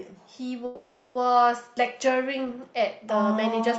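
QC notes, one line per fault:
0.65–1.17 s, call audio freeze: sound stalls into a fading buzz or hiss for 0.5 s, then resumes intact where it stopped; likely delayed packets emptied the jitter buffer.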